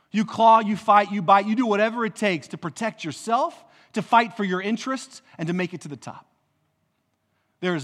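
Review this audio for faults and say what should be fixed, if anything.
Nothing in this recording needs fixing. No technical faults can be heard anywhere in the speech.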